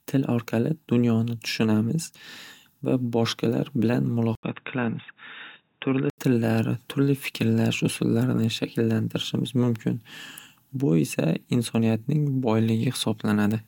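At 4.35 s the speech drops out for 80 ms, then returns dull and boxy, a few decibels quieter, with nothing above 3.8 kHz and a faint new background noise far beneath it, until 6.18 s. The input was likely switched to a poorer device.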